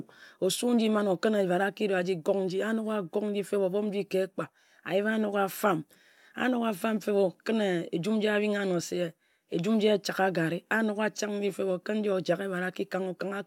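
No technical faults can be heard anywhere in the recording, and the signal holds steady throughout.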